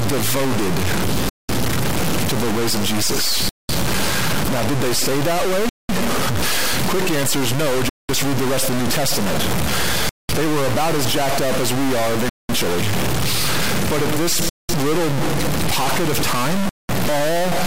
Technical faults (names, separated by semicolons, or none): stuck bit; gap between chunks